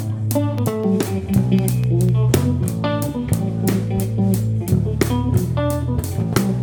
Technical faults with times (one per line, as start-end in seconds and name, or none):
0.58-2.34 periodic USB or driver dropouts